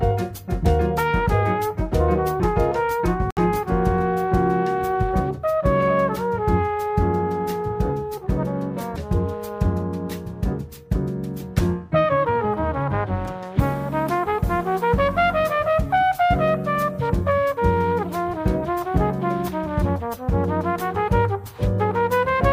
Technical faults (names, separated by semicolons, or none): Bluetooth dropout